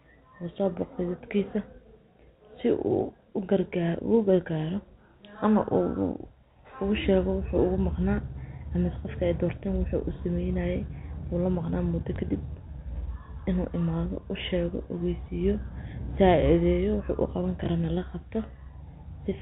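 At 12.16 s and again at 17.64 s, packet loss with last packet repeated briefly interrupts the speech over the telephone-band G.711 path. Each time, a lost 20 ms packet appears to have been filled by replaying the previous one, leaving a small blip rather than the silent gap a plain dropout would leave.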